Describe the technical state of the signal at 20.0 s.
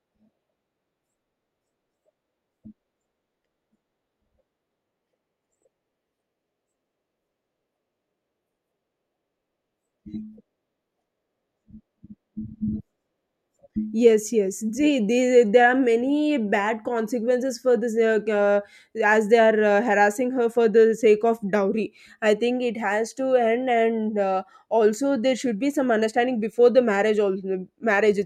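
At 20.0 s the speech signal is intact, with no audible technical fault at that moment.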